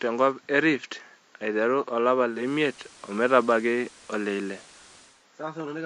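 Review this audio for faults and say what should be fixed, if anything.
At 2.25 s the audio shows digital radio blending to analogue. The receiver lost the digital stream and cross-faded to the station's FM broadcast over 288 ms. Hiss rises to roughly 30 dB below the signal, and the level shifts by about 3 dB. At 5.27 s it blends back to digital and the hiss drops away. To prevent it, record from a stronger digital signal or lock the receiver to digital only.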